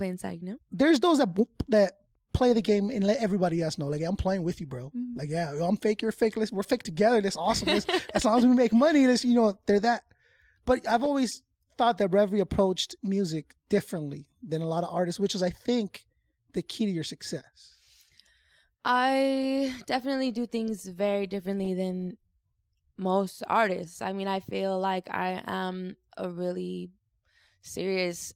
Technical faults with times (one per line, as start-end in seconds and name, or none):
none